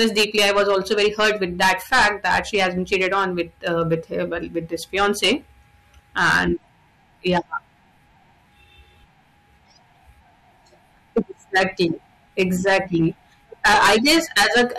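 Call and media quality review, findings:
Hard clipping, speech, eight spans: 0.00–4.22 s (about 17 dB over) ending before "well with this"; 4.96–5.33 s right after it (about 10 dB); 6.18–6.43 s (about 12 dB); 7.26–7.38 s (about 7 dB); 11.17–11.19 s (about 6 dB); 11.55–11.91 s (about 10 dB); 12.39–13.07 s (about 10 dB); 13.65–14.79 s (about 18 dB). Peaks flattened at the gain or converter stage, adding high harmonics heard as harsh fuzz, worst in the first and last spans.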